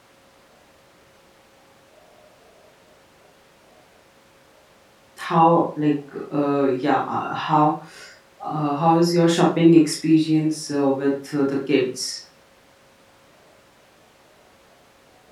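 No technical faults can be heard anywhere in the recording, and the signal holds steady throughout.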